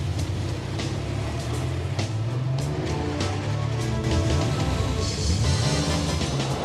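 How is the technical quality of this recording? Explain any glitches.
The recording has one clear fault, a doubled audio track, starting at 4.04 s and running to the end. From that point a second, full-band copy of the sound trails the original by around a fifth of a second, at roughly the same loudness. It has no decay or room colour and cuts in abruptly. The likely cause is the audio being captured twice, once through a slower path.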